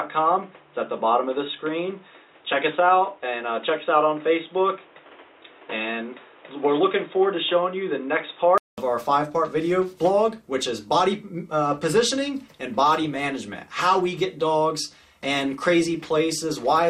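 From the start up to 8.78 s the audio sounds dull and boxy, with nothing above 3.8 kHz and background noise sitting about 30 dB below it. At 8.78 s there's a 200 ms gap, then it opens up at the same loudness. That's likely an input switched to a poorer device.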